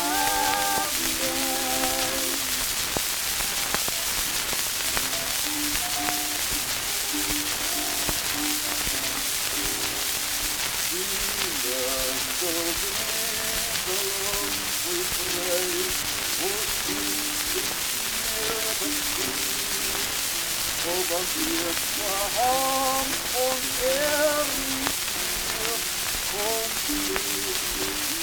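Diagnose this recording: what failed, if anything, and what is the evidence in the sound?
Nothing in the signal chain has failed; there are no dropouts, clipping, hum, timing breaks or other audible damage anywhere in the recording.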